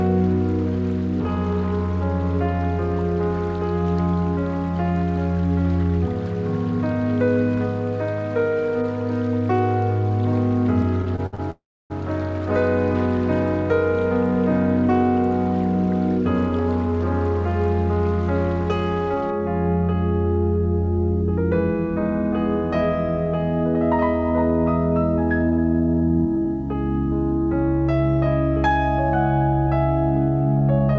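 Repeated stalls (stutter) run from 11.02 to 11.41 s in this audio, which is carried over a call path whose band stops at 8 kHz, consistent with a wideband codec such as G.722. Packets kept arriving later or more slowly than they were played out, so the jitter buffer emptied five times in under half a second. Each time the receiver stretched the last sound to cover the hole. About 145 ms was filled this way, roughly 38% of that stretch, with the longest gap 63 ms. Nothing is lost, but the audio catches and drags. A call audio freeze follows at 11.51 to 11.92 s. The sound hangs on a continuation of what came just before, which dies away into silence for about 300 ms. The likely cause is packets held up in transit, leaving the jitter buffer with nothing to play until they arrived. The receiver then resumed where it had stopped, so 394 ms of inserted time sits in the stream and the playback delay grows by that amount, with nothing actually missing. 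A jitter buffer speed-up occurs from 30.6 to 30.95 s. With more audio queued than its target, the receiver trimmed out many tiny slices, each one or a few pitch periods long, about 50 ms in total. Playback runs at 113% speed with unchanged pitch, so the close of the clip sounds rushed.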